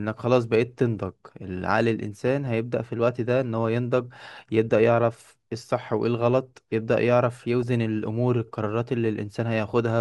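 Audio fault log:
2.27–2.47 s, 7.62 s, 9.69–9.79 s, DAB burbling: short noise blips over the speech. Bit errors at around 0.15 percent from weak reception pass the error correction and corrupt MP2 samples, so short blips of noise land in single sub-bands.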